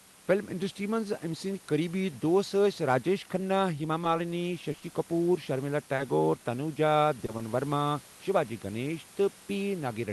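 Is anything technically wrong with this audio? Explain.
Yes. Between 4.04 and 7.41 s there are scattered short gaps: around ten lost or late packets, none longer than about 40 ms, which the receiver patched by extending the preceding sound. Unlike one long dropout, these are brief ticks and smears spread across the stretch.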